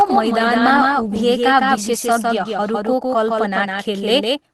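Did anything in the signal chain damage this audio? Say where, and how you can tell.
Yes, two faults are audible.

The first is a doubled audio track, present from start to finish. A second, full-band copy of the whole signal trails the original by roughly 150 ms and sits about 5 dB lower, so every onset is followed by a crisp repeat with no decay or room colour. That rules out an acoustic echo. The likely cause is a second, slower capture path or an edit that left two copies out of step. On a spectrogram, each feature has a fainter twin shifted about 0.15 s to the right. In the waveform, every attack appears twice.

The second is a lost packet rebuilt from error correction, in the network stage, from 2.39 to 2.41 s. One 20 ms packet went missing, and the decoder played the low-bitrate copy carried in the following packet. There is no dropout, but that short stretch sounds rougher and noisier than its surroundings. 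The waveform stays continuous with no gap or click. On a spectrogram, a narrow column at 2.39 s shows grainier, smeared harmonic detail before the normal texture resumes.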